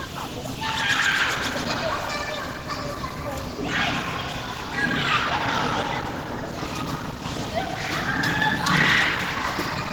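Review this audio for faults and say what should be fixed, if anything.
Across the whole clip there's plainly audible grain and roughness; tonal parts turn noisy and hoarse, though content still reaches about 20.2 kHz. That's likely Opus compression in hybrid mode, fitting roughly 16 kbps, with starved bands filled by noise. Encode at a higher bitrate or keep a lossless master.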